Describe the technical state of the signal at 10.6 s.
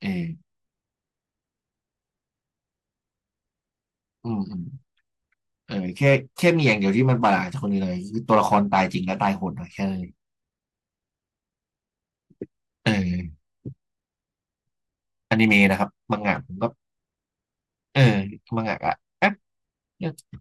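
At 10.6 s the signal is intact, with no audible technical fault at that moment.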